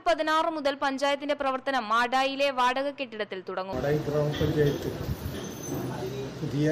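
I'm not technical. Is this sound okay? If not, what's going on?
No. At 3.72 s, damaged data in a compressed stream made the player misread a tiny piece of the file, producing a brief chirp or blip.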